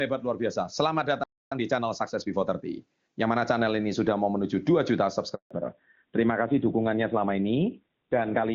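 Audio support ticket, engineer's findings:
Playback stall, 1.23 to 1.52 s. Player thread likely starved of buffered data or blocked; output went silent for about 280 ms, speech cut off mid-flow.

Time-compressed catch-up, 1.52 to 3.38 s, ending just before "channel ini sudah mau". Player draining the backlog left by the stall by excising short segments and cross-fading the joins. Speech runs about 1.15x fast with pitch unchanged.

Handover gap, 5.35 to 5.51 s. Call moved between networks and no speech frames arrived during the switch. Speech decays within a few tens of milliseconds, then 160 ms of silence; content from that window is lost outright, not delayed.

Fallback to narrowband, 5.51 s to end. After the handover the call dropped off HD Voice onto a narrowband codec. The sound points to AMR-NB at around 7.4 kbit/s, replacing AMR-WB at around 23.85 kbit/s, which sounds clean before this point. 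Nothing above 4 kHz remains, so sibilants and breath lose their air and speech turns duller and rougher.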